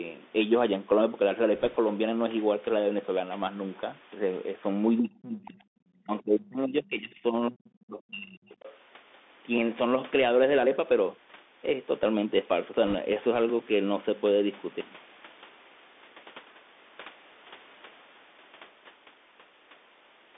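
Throughout the speech, the Bluetooth CVSD headset codec narrows everything to a line band of roughly 250 Hz to 3.6 kHz. Its one-bit delta modulation at 64 kbps only steps up or down, so fast, loud high-frequency movement outruns the adaptive step. Sibilants come out scratchy, and a granular hiss sits beneath the voice. On a spectrogram, energy stops abruptly near 3.6 kHz, and a grainy noise floor fills the band between syllables. The call microphone processing's own high-pass, which removes the deepest bass, is just a normal part of that chain.

From 1.55 to 1.76 s, and again from 12.87 to 12.95 s, there are bit errors on the Bluetooth voice link. Flipped bits in a CVSD stream each nudge the signal by only one small step and then decay, so there are no sharp clicks. What you hear is a rushing crackle laid over the speech. The first burst runs at roughly one percent bit errors. The second is several times denser and noticeably rougher. 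A spectrogram shows broadband speckle across the whole band for those spans, and the waveform looks fuzzed rather than spiked.

From 4.99 to 5.59 s, and over a longer stretch from 6.04 to 8.51 s, the talker's level sags hard in speech suppressed in double talk. The dips reach about 25 dB in the first span and about 30 dB in the second. The likely cause is an echo canceller that could not tell the near talker from loudspeaker echo while both sides spoke, so it attenuated everything. The waveform envelope caves in.

Interleaved with those dips, the other side's voice leaks through, at 5.76 to 6.03 s, 7.75 to 7.84 s, 8.01 to 8.10 s, and 8.51 to 8.75 s. These are faint scraps at about 30 dB below the speech, and the last one is louder at about 25 dB down. This is most likely far-end audio from the loudspeaker that the echo canceller failed to fully remove from the microphone. On a spectrogram, these appear as weak, separate harmonic traces that do not belong to the main talker.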